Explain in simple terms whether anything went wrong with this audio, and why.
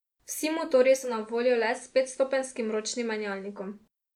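Something did go wrong: from 0.81 to 3.85 seconds the radio lost its digital signal and switched over to the station's ordinary FM broadcast, then switched back. This is digital radio blending to analogue. Each switch fades across in about half a second. While on FM, the speech gets a faint background hiss and comes through slightly quieter.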